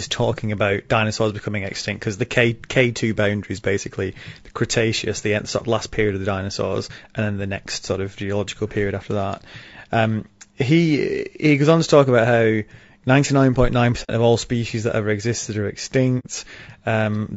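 Throughout the clip the speech has a rough, grainy texture, with noise filling the gaps between harmonics and a top band that sounds thinned and somewhat synthetic. This is likely low-delay AAC compression of the AAC-ELD kind used for video calls. Its short transform frames separate pitch harmonics poorly and spend bits inefficiently. The damage is plainly audible, which fits a bitrate around 32 kbps.

At 14.03 to 14.11 s and again at 16.19 to 16.26 s, the sound fades out into a brief soft-edged hole and fades back in. This is AAC frame loss with muting. Each gap points to two consecutive frames going missing, about 60 ms of audio. The decoder replaced their spectra with silence, and the overlapping transform windows smooth the edges into short fades rather than hard cuts.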